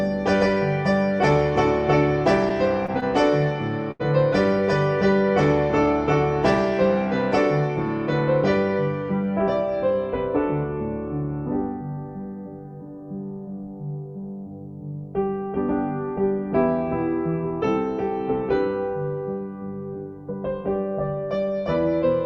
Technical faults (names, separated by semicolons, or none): short stall from a late packet